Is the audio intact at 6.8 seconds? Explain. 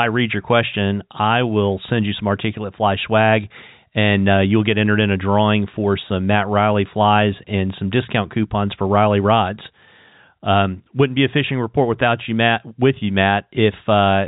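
Yes, the speech is intact at 6.8 seconds, carried without a break through its narrowband G.711 telephone coding.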